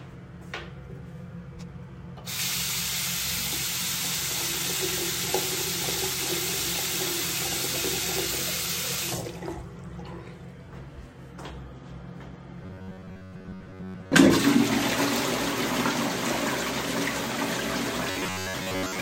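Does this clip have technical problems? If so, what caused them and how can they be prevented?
Yes. Robotic sound from repeated short buffers at 12.64–14.15 s and 18.10–19.01 s: a rigid 93.8 Hz buzz, likely caused by a block of about 10.7 ms being replayed while most of the real audio is skipped. A spectrogram shows evenly spaced horizontal harmonic stripes, and the waveform shows identical repeating cycles. To prevent it, use larger playback buffers so new audio arrives in time.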